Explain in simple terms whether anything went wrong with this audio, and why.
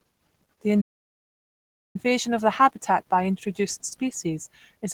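Two things went wrong. The speech throughout sounds grainy, rough and hoarse, the signature of likely Opus compression squeezed hard. Unlike MP3-style damage, it swirls less and leaves fewer hollow, watery gaps; the sound stays full but coarse.

There is also a playback stall. At 0.81 s the audio goes completely silent for about 1.1 seconds, then resumes at 1.96 s with "of the habitat by". This is a gap of silence, not a glitch or stutter, meaning the player likely ran short of data briefly and then picked up again.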